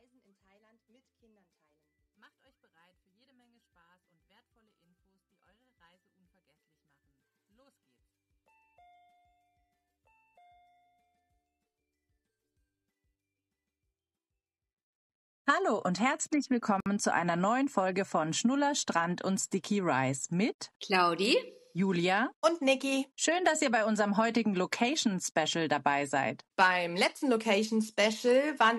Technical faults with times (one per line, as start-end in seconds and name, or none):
16.80-16.86 gap at a join of encoded pieces